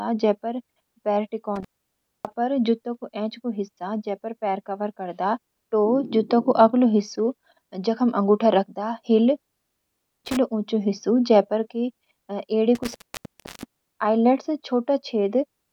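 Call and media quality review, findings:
Intermittent contact: speech drops out at 1.56–2.34 s, 9.37–10.37 s and 12.75–13.82 s, with the line open about 0.60, 0.76 and 0.68 s. Crackle at break and remake, faint hiss in gaps. Probable loose cable or plug.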